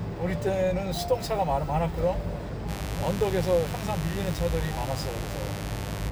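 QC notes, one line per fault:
2.66–6.11 s, mains buzz: a steady, raspy buzz enters at 2.66 s and runs to the end, roughly 10 dB below the sound. Switching spikes on the 50 Hz supply, twice per cycle, leak into the signal path, stacking harmonics up into the kilohertz range.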